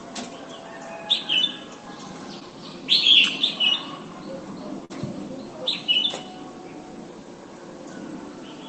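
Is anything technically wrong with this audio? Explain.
Yes. Around 2.39 to 2.43 s there is a short concealed packet loss: about 20 ms arrived too late, and the decoder filled it by extending the preceding sound, leaving a brief smear or wobble. From 4.85 to 4.94 s a burst of packet loss cut out about 40 ms. The receiver stretched the last sound into a fading buzz or hiss, then resumed slightly further on with a little audio skipped. Both happen on a call path whose audio is limited to about 8 kHz, which fits a low-bitrate Opus stream.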